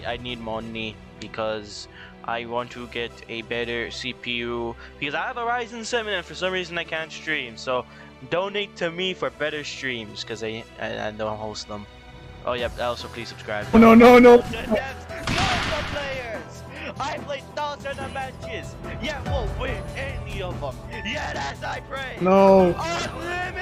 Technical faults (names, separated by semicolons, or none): none